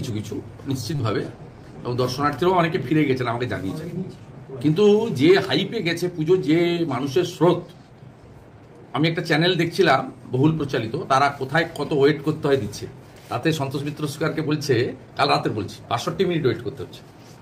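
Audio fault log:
0.95–1.01 s: short concealed packet loss. About 40 ms of audio failed to arrive in time for decoding, and the receiver synthesised roughly 38 ms to cover the gap. It did so by extending the preceding sound, repeating its periodic structure or substituting shaped noise, then cross-fading back into the received signal. The result is a brief smeared, wobbly patch just under a second in, where fine detail in the original sound is replaced by an approximation.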